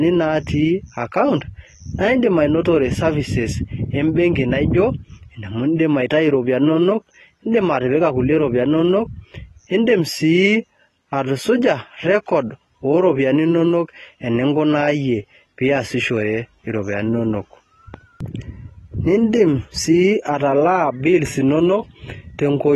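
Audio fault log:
throughout: AAC compression. Dull, smeared speech with a fizzy, warbling texture and nothing above 12.1 kHz, likely AAC-LC coding at a bitrate that fits 32 kbps.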